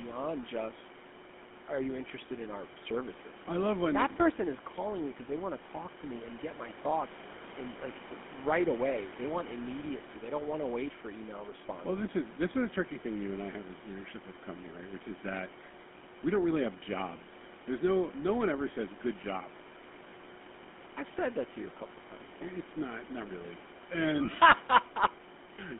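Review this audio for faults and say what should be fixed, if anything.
GSM full-rate codec damage runs through the whole clip. The band is confined to roughly 200 Hz to 3.4 kHz, and the speech carries a plainly audible buzzy, gravelly roughness. That roughness comes from the codec rebuilding the voice from a vocal-tract filter driven by a coarse, regularly spaced pulse excitation, which fits the 13 kbps full-rate mode. The room noise, about 16 dB below the speech, passes through the same narrow band. To prevent this, carry the call over a wideband codec such as AMR-WB or Opus instead of GSM full rate.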